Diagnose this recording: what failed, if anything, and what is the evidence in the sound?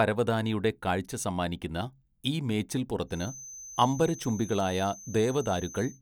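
A feedback whistle enters at 3.06 s and continues to the end of the speech: a thin, steady 6.2 kHz tone roughly 20 dB under the signal, swelling and fading slowly in level. The likely cause is an acoustic loudspeaker-to-microphone loop held just short of runaway gain.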